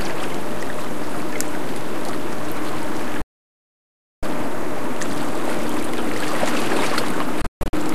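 From start to finish nothing audible gives it away, but the waveform sits off centre, leaving steady energy at the very bottom of the spectrum. This is a DC offset: a constant shift that pushes the whole signal away from zero and uses up headroom. At 3.22 s the audio cuts to silence through a fade of about 3 ms and stays muted until 4.23 s, roughly a second of lost sound. From 7.42 to 7.74 s it breaks into several short holes, totalling 240 ms, the longest 144 ms. These are digital broadcast dropouts: the receiver stopped getting good frames and muted until valid data returned.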